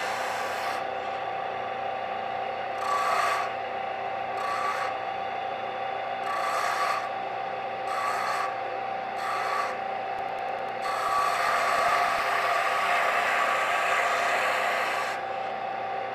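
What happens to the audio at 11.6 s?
At 11.6 s the audio sits inside a run of periodic USB or driver dropouts from 10.19 to 12.19 s. Every 0.1 s about a millisecond goes to silence, heard as evenly spaced ticks.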